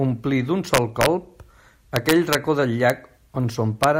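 Speech, and it's hit by integer overflow: loud peaks wrap to the opposite sign instead of limiting, giving harsh cracks from 0.74 to 1.06 s and 1.96 to 2.35 s, pushed about 2 dB over, plus single snaps at 2.90 and 3.84 s.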